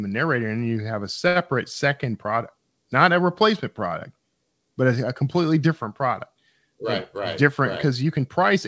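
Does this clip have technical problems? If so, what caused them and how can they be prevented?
Yes. The short stall from a late packet happens at 1.28 to 1.37 s. A packet arrived late, the jitter buffer emptied, and the receiver held the preceding sound for 73 ms, then resumed with nothing lost. A steadier network or slightly deeper jitter buffer prevents this.

The jitter buffer speed-up runs from 7.18 to 8.56 s. With too much audio queued, the receiver repeatedly removed short pitch-period slices, roughly 70 ms in total. The speech plays at 105% speed, with unchanged pitch, and sounds hurried. Reducing packet bunching on the network avoids this.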